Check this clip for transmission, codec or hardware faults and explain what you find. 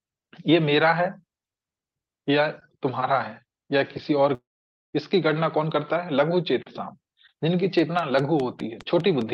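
Two faults stand out. Both sit on top of a call path whose high end stops near 8 kHz, which fits a typical Opus call link.

From 4.34 to 4.95 s there is a long network dropout. About 0.6 s of audio never arrives. The receiver stretches the last sound into a brief fading buzz. Then roughly half a second of near silence follows. The audio resumes at 4.95 s, but the missing stretch is simply gone. The likely cause is lost packets on the network.

From 7.79 s to the end of the clip, a train of clicks runs over the sound. The clicks arrive at a regular pace of about 4.9 per second. Each has much the same shape. They peak at about 10 dB above the audio, so they read as sharp ticking. The ticks continue through quieter moments too. Electrical interference from nearby equipment or a faulty connection or power supply is the likely source.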